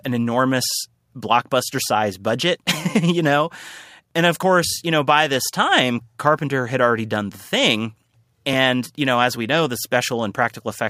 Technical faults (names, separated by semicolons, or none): dropped buffer (overrun)